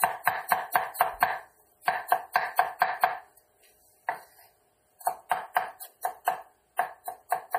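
A watery, swirling texture runs through the whole clip, with transients smeared and nothing at all above about 15.3 kHz. This is MP3 compression damage, likely from a low bitrate around 40 kbps, where the encoder cuts the treble and lets weak frequency components drop in and out from frame to frame.

At 6.25 s a brief hiss leads into a sharp attack, spreading about 18 ms ahead of it and softening the onset. This is pre-echo: the codec spreads quantisation noise sized for the loud attack across its whole block, filling the quiet moment just before.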